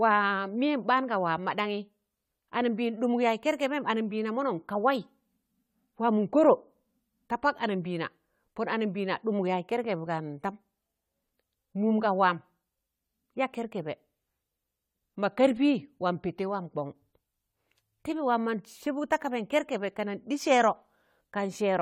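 From start to finish the speech carries generation loss: a swirly, hollow smear with blurred consonant attacks, likely from about four successive lossy re-encodes, fitting AAC-LC near 64 kbit/s. A spectrogram shows flickering holes and empty bands, with nothing above 19.6 kHz.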